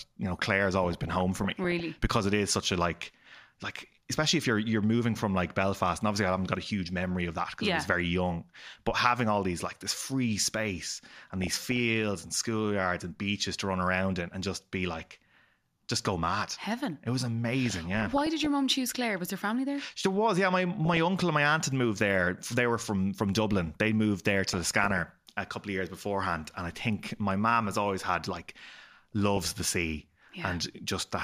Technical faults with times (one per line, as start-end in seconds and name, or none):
0.83-1.83 DAB burbling
10.93-11.80 DAB burbling
17.66-18.46 DAB burbling
20.85-20.97 DAB burbling
24.47-25.10 DAB burbling
29.12-29.52 DAB burbling